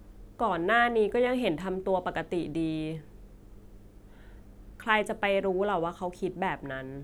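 Nothing technical goes wrong anywhere in this bit of speech, so there's no fault to point to at any moment.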